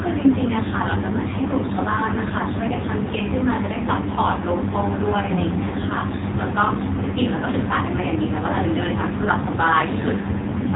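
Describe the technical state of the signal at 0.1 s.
At 0.1 s the speech is already passing through an AMR narrowband mobile codec, and it stays that way for the whole clip. The audio is band-limited to telephone width, with nothing above about 3.8 kHz, so it sounds muffled and boxy. The codec rebuilds the speech from a vocal-tract model driven by sparse pulses. The damage is heavy, giving a buzzy, synthetic quality, which points to one of AMR-NB's low modes, around 5.9 kbps.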